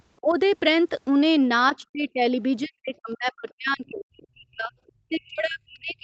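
With both sides likely talking at once, the echo canceller turns the talker down as speech suppressed in double talk. From 0.21 to 0.37 s the voice dips by about 20 dB. Inside that dip, at 0.30 to 0.34 s, the other side's voice leaks through as a faint scrap around 35 dB below the speech, likely residual loudspeaker echo the canceller failed to remove.

The voice sinks again by about 20 dB from 1.72 to 2.24 s. From 2.63 to 4.74 s it is pushed down much harder, by up to about 40 dB, for roughly two seconds.

At 4.87 to 4.92 s another brief leak of the other side appears, about 40 dB under the speech. From 5.09 s to the end the talker is again suppressed by up to about 40 dB. Throughout, the top end stops at 8 kHz, the normal call bandwidth.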